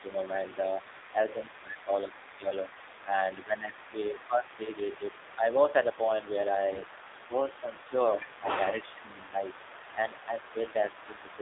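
The whole recording carries AMR narrowband mobile codec coloration. Audio is confined to roughly 300 Hz to 3.7 kHz, with nothing in the upper band, and the vocal-tract model's sparse pulse excitation gives a plainly audible buzzy, synthetic edge that fits a low mode around 7.4 kbps.

From 0.00 s to the end there is the other side's voice leaking through. A faint second talker sits around 20 dB below the main speech, most likely loudspeaker echo that the echo canceller failed to fully remove from the microphone path.

Speech suppressed in double talk appears in four spots, each likely the echo canceller ducking everything while both sides talk. There is a brief dip of about 5 dB from 0.00 to 0.04 s. Deeper cuts of about 15 dB come in pieces between 1.14 and 2.45 s, and of about 10 dB between 3.05 and 5.99 s. A lighter dip of about 5 dB runs from 10.53 to 11.39 s.

From 6.72 to 6.89 s, AMR bit errors make the sound hoarse and gargly while its level and pitch hold. 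That span fits about eight corrupted 20 ms frames at an error rate of a few percent. Misplaced excitation pulses and wrong gain and spectral values cause the damage.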